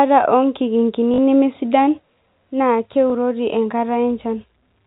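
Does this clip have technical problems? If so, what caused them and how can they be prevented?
Yes. Packet loss with last packet repeated: the receiver lost audio from 1.14 to 1.18 s and from 3.10 to 3.12 s, which fits 20 ms packets, and replayed the previous one, causing a brief robotic stutter and then a small blip. Proper packet-loss concealment and a jitter buffer would prevent it.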